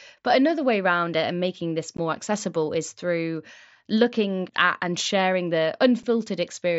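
At 1.97 s and again at 6.03 s the speech drops out abruptly, an instance of unconcealed Bluetooth headset packet loss: voice packets between headset and phone never arrived, and nothing filled the gap. The first hole lasts about 15 ms, which fits two lost 7.5 ms packets. The second lasts 7.5 ms, one packet. Each registers as a brief cut with abrupt edges. On a waveform it shows as a flat gap with sheer edges, and on a spectrogram as a thin vertical blank through the mSBC wideband band below 8 kHz.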